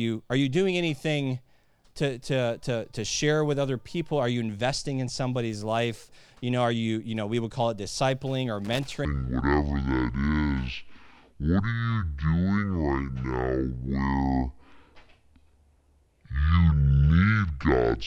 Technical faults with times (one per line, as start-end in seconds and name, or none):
8.65-8.93 loose connector crackle
9.05-18.06 section at the wrong speed